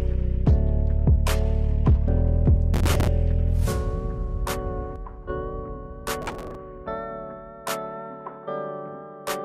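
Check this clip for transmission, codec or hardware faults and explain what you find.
Two kinds of fault turn up here: a couple of bursts of processor overload crackle and one sudden gain jump.

The processor overload crackle comes in at 2.74 to 3.08 s and again at 6.22 to 6.55 s. The processor kept missing its deadlines on very short buffers, a few milliseconds each, some twenty to thirty times in a row. Each miss replays a scrap of old audio with hard edges, so you get a gritty tearing over the sound.

The sudden gain jump runs from 4.96 to 5.29 s. The whole signal, background included, drops by about 6 dB all at once and stays down for about a third of a second. It's likely a gain step applied without any ramp.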